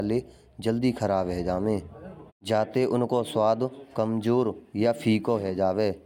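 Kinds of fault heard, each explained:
No technical faults detected.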